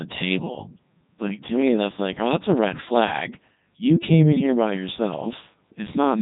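Throughout, the speech passes through a Codec 2 vocoder, likely its 3.2 kbit/s mode, rebuilt from pitch and envelope as sine waves: robotic, buzzy, with nothing above 3.8 kHz.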